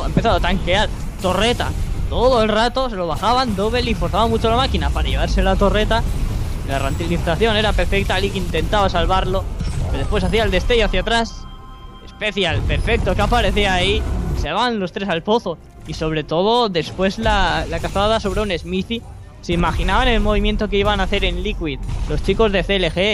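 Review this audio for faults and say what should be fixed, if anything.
Nothing here needs fixing, so it can be left as it is.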